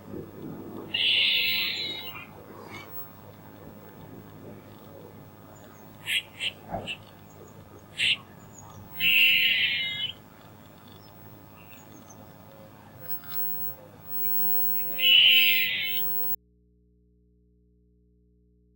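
At 16.35 s the audio drops out to a faint residue and stays that way to the end. The sound cuts off abruptly, leaving only mains hum about 35 dB down, likely because the source was lost while the input stayed live.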